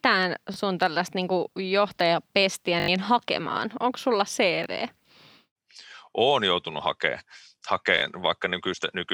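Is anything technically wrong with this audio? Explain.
Yes, there are four repeated-buffer faults, at 0.54–0.56, 2.8–2.88, 4.64–4.66 and 7.98–8.02 s. Each time fresh audio arrived late, so the same slice of roughly 20 ms (which fits a 20 ms buffer) replayed with hard joins. It sounds like a buzzy stutter: one extra play at 0.54 and 4.64 s, two at 7.98 s, four at 2.8 s. Each event drops the speech it replaces, up to about 70 ms. Unlike a dropout, the gap is filled with looped sound rather than silence.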